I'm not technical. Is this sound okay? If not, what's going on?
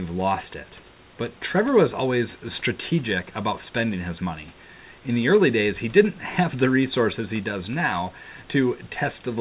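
Yes, nothing has gone wrong in this recording. The speech has the slightly muffled, phone-like tone of a normal call line, which carries nothing above 4 kHz, and a faint background noise from the room sits well below the voice.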